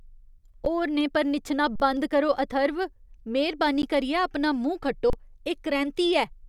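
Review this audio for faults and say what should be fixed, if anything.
Underrun with held sample: the output buffer ran dry at 0.65 s, just before "होरनें पर निच्छना बंद", at 1.76–1.80 s between "होरनें पर निच्छना" and "बंद करो", at 3.82 s, and at 5.10–5.13 s. The converter froze on its last value, so the speech flattens abruptly. About 10 to 40 ms of live audio is lost each time. The 11.61 ms gaps fit a 512-sample buffer. Enlarging the output buffer or raising the audio thread's priority would prevent this.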